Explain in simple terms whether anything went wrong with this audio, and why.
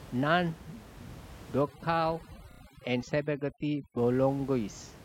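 Yes, two things went wrong. From about 1.61 to 3.98 s there's overdone noise removal: a noise reduction tool was set too hard, so along with the room noise it clipped off the quieter bits of speech, leaving a lowered background that breaks up into little twinkly specks.

Inside that stretch, from 2.51 to 2.61 s, you get repeated frames. What sounds like one short 32 ms chunk of compressed audio got played three extra times, so there's a quick stutter, and the clip runs about 96 ms longer than it should.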